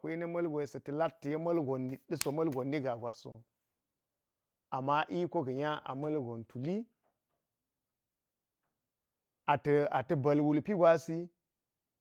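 At 3.07 to 3.16 s, a burst of packet loss fades the last sound for about 60 ms, then skips ahead, dropping 60 ms of speech. Short stalls from late packets follow at 3.31, 3.46, 3.96 and 4.30 s, stretching sounds by 30, 20, 40 and 50 ms. Speech resumes without any gap.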